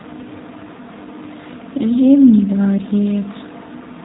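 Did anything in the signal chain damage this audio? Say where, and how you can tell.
Yes, at the codec stage: the speech carries G.729 coding damage throughout. Nothing passes above about 3.8 kHz, and the voice has a plainly audible rough, synthetic quality, consistent with an 8 kbit/s model-based coder rebuilding each frame from a vocal tract filter, pitch predictor and sparse pulses.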